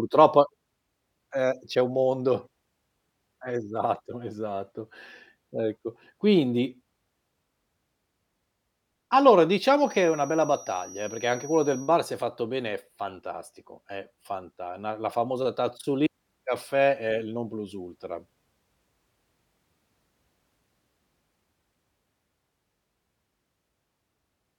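A feedback whistle runs from 9.77 to 11.95 s: a thin, steady tone near 5.8 kHz, about 20 dB below the speech, swelling and fading slowly in level. The likely cause is a loudspeaker-to-microphone loop held right at the edge of feedback, sustaining that single frequency without building further.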